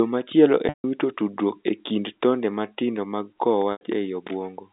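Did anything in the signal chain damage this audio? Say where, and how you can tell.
Yes, at the network stage: packet loss with pitch repetition. At 0.69–0.84 s, before "wito tudruok e kind", and 3.72–3.81 s, after "tonde matindo mag kowo", the receiver repeats the last pitch period as a buzzy hold, fades it out, then cross-fades back. The 150 ms and 90 ms gaps fit lost 30 ms packets.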